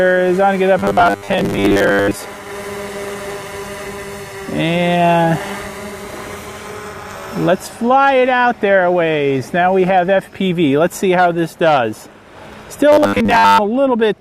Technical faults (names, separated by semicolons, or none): robotic sound from repeated short buffers